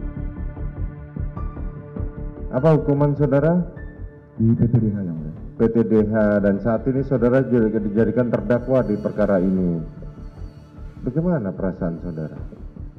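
No technical faults can be heard anywhere in the recording. Nothing in the audio needs a time mark or a fault description.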